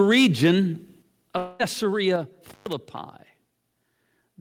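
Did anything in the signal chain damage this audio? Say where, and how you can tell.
Yes. Four kinds of fault show up, spread across the analogue wiring, the converter, call processing and the network.

The first is microphone overload at the converter, from 0.00 to 0.51 s. The input was driven about 5 dB past the converter's limit, which is likely a microphone gain set too high. Around 2 percent of samples have their tops flattened. You hear it as a gritty, crackling edge on the loudest syllables, because the cut-off waveform adds distortion products the original sound never had.

The second is the microphone volume stepped down, heard twice. At 1.02 s the whole signal drops by about 6 dB in one jump, and at 2.16 s it drops again by about 5 dB. Background and foreground fall together and instantly, with no fade. That points to call processing reacting to an input it judged too hot, likely by cutting the device gain in a single step rather than through any acoustic change.

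The third is a long network dropout, from 1.37 to 1.61 s. About 220 ms of audio likely never reached the receiver. The concealment stage covered nearly all of that span, roughly 219 ms, by stretching the last received sound into a fading buzz-like continuation rather than leaving silence. When real audio resumes, it carries on from a later point, so the lost stretch is simply absent rather than delayed.

The fourth is an intermittent contact in the analogue wiring, between 2.46 and 2.73 s. A loose cable or plug opened for about 122 ms in total within that window. The signal drops out or breaks up there, with crackle at the moments the contact opens and closes, and faint hiss remains while the line is open.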